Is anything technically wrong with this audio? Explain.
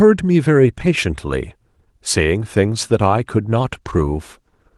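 Yes. From 3.48 s to the end at 4.77 s, there is a call bitrate drop. The encoder is starved of bits, so the speech turns coarser and rougher. That fits a fall from about 32 to 18 kbps. It is a steady degradation rather than the dropouts or glitches of packet loss.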